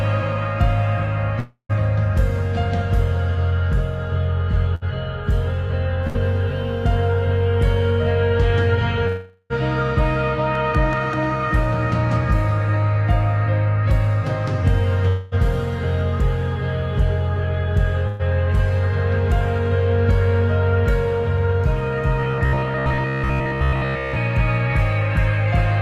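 At 1.39 to 1.72 s, 9.07 to 9.53 s and 15.08 to 15.35 s, the audio stops and the last sound is stretched into a fading buzz. These are likely long network dropouts, losing about 300, 420 and 240 ms. The first decays into about 100 ms of silence. Their length sets them apart from the shorter gaps.

Shorter bursts of packet loss fall at 4.75 to 4.84 s and 6.07 to 6.17 s, each losing about 60 ms, and at 18.08 to 18.22 s, losing 120 ms. Each time the last sound is held briefly and turned down. The audio then resumes slightly ahead.

From 22.20 to 24.18 s, the sound becomes a rigid metallic buzz at 66.8 Hz. This is robotic sound from repeated short buffers, with a likely cause of roughly 15 ms segments being looped over most of the audio. Unlike the gaps above, it continues for about 2 s.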